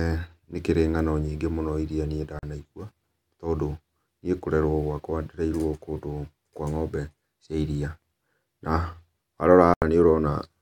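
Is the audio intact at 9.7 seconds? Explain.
No, there is a Bluetooth dropout from 9.74 to 9.82 s, about 81 ms of silence, likely from roughly four wireless packets arriving too late and being discarded. The sound resumes further on, and the spectrogram and waveform show a sharp-edged blank gap.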